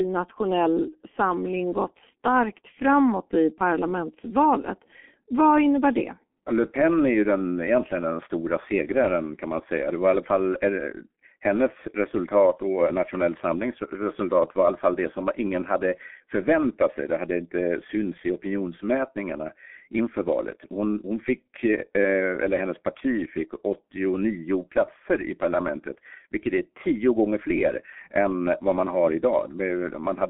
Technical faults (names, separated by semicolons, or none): G.723.1 codec